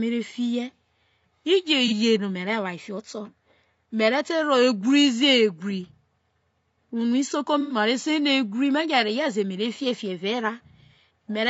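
The whole recording carries a rough, grainy texture. Noise fills the gaps between the pitch harmonics, and the top band sounds thin and synthetic. The likely cause is low-delay AAC compression, probably AAC-ELD at a modest rate, such as 32 kbps. Its short frames resolve harmonics poorly.

At 1.88 s there is an AAC frame loss with concealment. A brief smeared, noisy patch lasts about 50 ms, which fits one lost frame. At 7.61 s a longer patch runs to 7.75 s and sounds phasey and washed out, which fits about three lost frames. Each time, the decoder rebuilt the gap from the last good spectrum.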